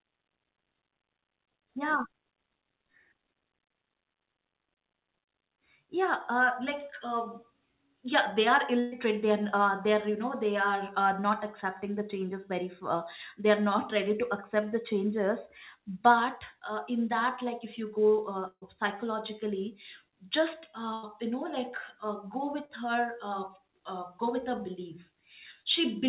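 Bursts of packet loss occur at 8.80 to 8.94 s, just after "yeah they are", at 18.48 to 18.64 s, just before "psychologically just", and at 20.94 to 21.05 s, right after "psychologically just". Each time roughly 100 to 140 ms of audio never arrived, so the receiver stretched the last sound into a held, fading buzz or hiss. In the middle burst about 60 ms decays to silence. The speech then resumes further on, with that stretch missing.

Short concealed packet loss at 22.65 to 22.71 s replaces about 40 ms of audio. The decoder carries the previous sound forward and blends it back into the real signal, which comes across as a brief smear. All of this sits on a narrowband call path with nothing above 4 kHz, consistent with G.711 mu-law coding.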